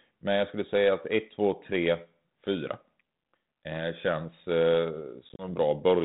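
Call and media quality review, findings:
Packet loss on the ADPCM call, 5.29 to 5.45 s, right after "känns eh". Hard-edged silent gaps, 60 ms gone in total across 100 ms, longest hole 30 ms. A handful of packets dropped, then the decoder's predictor and step size drift out of sync with the sender. Audio comes back slightly distorted with some grit before it resettles. Codec is G.726 at 32 kbit/s, light coding damage.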